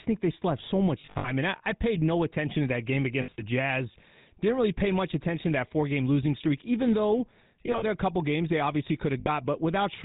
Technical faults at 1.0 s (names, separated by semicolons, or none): GSM full-rate codec; lost GSM frames